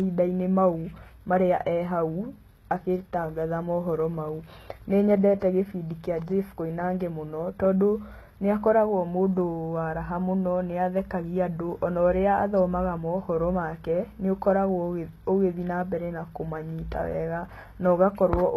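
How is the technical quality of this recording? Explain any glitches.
The speech carries one fault for its whole length: low-bitrate audio saved at a high bitrate. The artefacts of the first, low-rate encoding remain throughout, and the second pass adds almost nothing. These traits fit a very low-rate HE-AAC encode, around 16 kbit/s, that was likely later rewritten as an MP3 of about 192 kbit/s. The larger file keeps every loss from the first pass. What separates this from a plain high-bitrate MP3 is that a genuine 192 kbit/s MP3 sounds clean and full, while here the damage sounds far worse than the file size would suggest.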